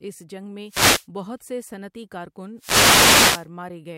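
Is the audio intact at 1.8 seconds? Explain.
Yes, the audio is intact at 1.8 seconds, with no fault present at that moment.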